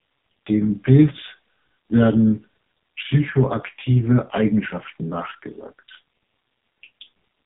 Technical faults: AMR narrowband mobile codec

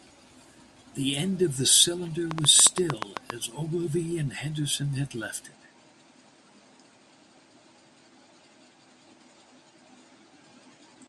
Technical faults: train of clicks; input switched to a poorer device

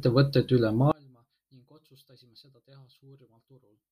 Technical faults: one channel inverted

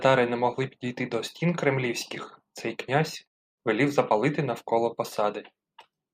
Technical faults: none

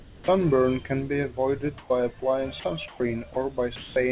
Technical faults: comfort noise in place of the background; sound dropped by the voice detector

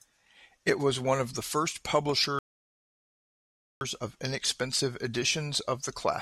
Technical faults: rebuffering stall

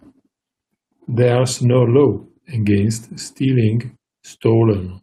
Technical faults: lost packet rebuilt from error correction

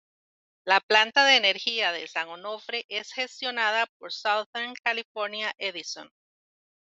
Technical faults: one channel drops out

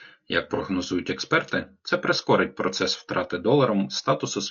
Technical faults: low-delay AAC compression; AAC frame loss with concealment

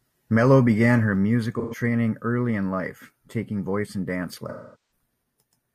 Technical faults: AAC frame loss with concealment

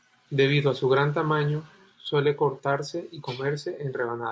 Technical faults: none

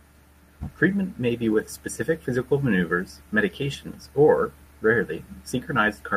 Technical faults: none

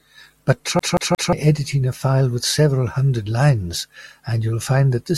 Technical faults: CD stuck on one turn

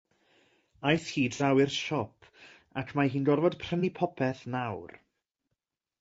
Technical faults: low-delay AAC compression; AAC frame loss with concealment

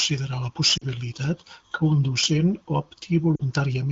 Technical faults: lost AMR speech frames

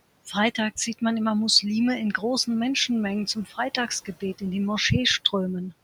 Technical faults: speech cut by the noise suppressor

